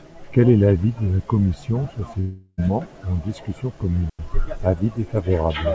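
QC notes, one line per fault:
2.20 to 2.60 s, long network dropout: the sound smears into a fading buzzy continuation for roughly 0.38 s, then a brief silence before the audio picks up again with a chunk simply gone. That's the likely cause: packets stopped arriving and the receiver's concealment tried to fill the gap.
4.10 to 4.19 s, digital wireless dropout: a clean 94 ms hole of near silence with a very quick fade and no noise burst on either side. The radio link lost too much data, so the receiver just muted briefly instead of playing garbage, above G.722 call-path audio that has nothing over 8 kHz.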